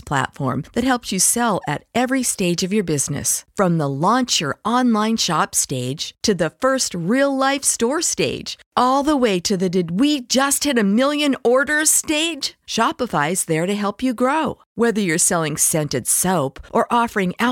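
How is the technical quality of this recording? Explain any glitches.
The recording has one persistent fault: clock slip clicks running from 0.12 s to 17.51 s. A faint, regular ticking sits under the speech, roughly every 30 ms, so close together that it blends into a soft rattle. The likely cause is two devices running on unsynchronised clocks that disagree by something on the order of 1000 ppm. Each time that drift adds up to a whole sample, a single sample is dropped or repeated, leaving a tiny discontinuity. Over the clip that adds up to several hundred slips. They stand out most on louder, sustained stretches of speech and fall away in the pauses.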